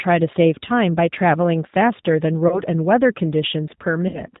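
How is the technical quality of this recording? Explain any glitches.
The technical quality is limited: the whole recording carries the sound of a low-rate speech codec, and two short dropouts are patched over in the second half.

The G.729 codec damage is plainly audible throughout. The speech is rebuilt from a vocal-tract filter, a pitch predictor and a few pulses per frame, so it comes across intelligible but rough and slightly synthetic, which fits an 8 kbit/s G.729A stream. On a spectrogram, nothing appears above 4 kHz, and the harmonics below that look smeared and grainy rather than clean.

VoIP packet loss concealed by the speech codec occurs at 2.48–2.62 s and again at 4.08–4.23 s. The first gap is about 30 ms of missing audio, which fits one lost packet. The second is about 60 ms, which fits two. The decoder fills each gap by repeating its last pitch and filter at falling gain, so the sound turns into a fading buzzy tone or coloured noise. 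In the waveform, the envelope shrinks smoothly instead of dropping to zero. Because each frame builds on the previous one, the sound stays weak or distorted past the end of each gap.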